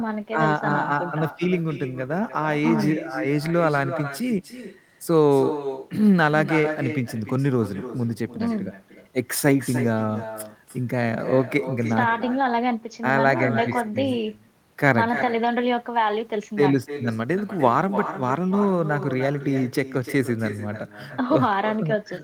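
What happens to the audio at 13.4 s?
At 13.4 s the speech is shadowed by a delayed copy of itself. This is echo with no canceller, and it runs through the whole clip, not just this moment. The far end plays the call on a loudspeaker. Its microphone picks that sound up and sends it back, and nothing removes it. The repeat arrives roughly a third of a second late, about 11 dB below the speech. It sounds thinner than the original.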